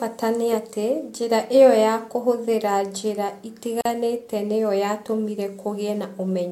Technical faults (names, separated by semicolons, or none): gap at a join of encoded pieces